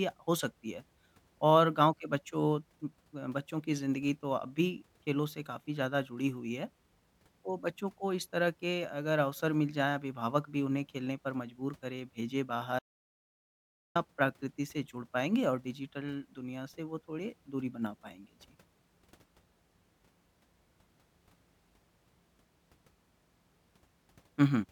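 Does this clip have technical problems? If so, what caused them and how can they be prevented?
Yes. The speech has an audio dropout to silence from 12.79 s to 13.95 s, about 1.16 s of missing material. The sound stops abruptly mid-flow and resumes just as abruptly, and the gap is silent with no room tone, so the input was likely lost while the recorder kept writing zeros. A natural pause or a noise gate would leave faint background or a tapering edge. Secure cables and connections, check mute states, and monitor input levels during recording.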